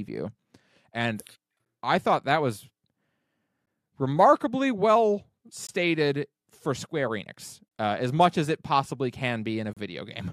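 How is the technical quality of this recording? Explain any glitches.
The speech is interrupted by five brief, hard-edged silences. The timestamps of consecutive 2-second stream segments leave small gaps, and the player fills each one with silence. This gap between stream segments occurs at 1.65, 3.66 and 5.67 s, then 7.68 to 7.71 s and 9.73 to 9.77 s. The gaps grow from 10 to 33 ms, but no audio is lost.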